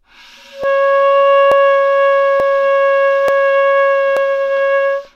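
A regular click recurs about every 0.88 s in this recording of sounds, from about 0.64 s to 5.05 s, roughly seven times. It is likely clock drift buffer slips: two clocks differing by several hundred parts per million force a few dozen samples to be dropped or repeated at each slip.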